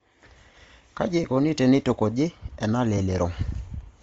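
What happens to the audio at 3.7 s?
At 3.7 s, as throughout, the speech likely went through low-rate Bluetooth LC3 compression, consistent with about 32 kbps. Its upper spectrum is thinned and noise-filled, sounding breathy and grainy.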